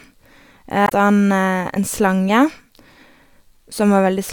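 Damaged data in a compressed stream disrupts this speech clip from 0.85 to 0.92 s, a brief disturbance about 70 ms long. Corrupted bytes in the encoded frames there cause the decoder to misread them and lose sync until it finds the next valid frame header.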